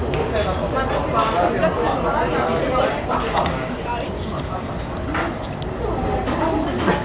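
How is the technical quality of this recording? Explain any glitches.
No glitches are heard anywhere in this recording.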